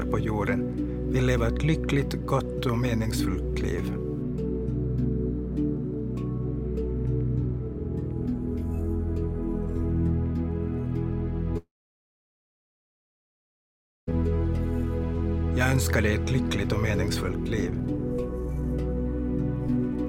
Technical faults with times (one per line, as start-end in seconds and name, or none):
11.57-14.09 long network dropout